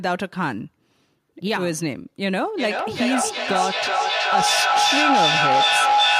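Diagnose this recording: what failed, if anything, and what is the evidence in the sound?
From 2.57 s to the end, a tone near 700 Hz swells over the speech, pulsing roughly every 400 ms and peaking about 5 dB above it. This is feedback howl: two call devices in one room form a microphone-to-loudspeaker loop with gain above unity, so each pass grows louder.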